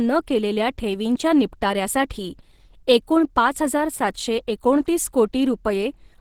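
Opus compression runs throughout this speech clip, which sounds muffled, hoarse and grainy, likely from the codec's hybrid speech mode at a rate near 16 kbps.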